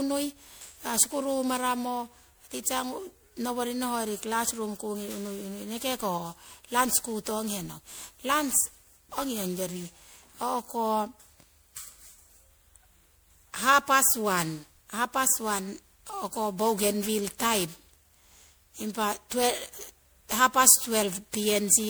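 Throughout, the speech sounds swirly, hollow and smeared, with blurred attacks. Likely generation loss: MP3 re-encoded about ten times, fitting a 128 kbit/s chain.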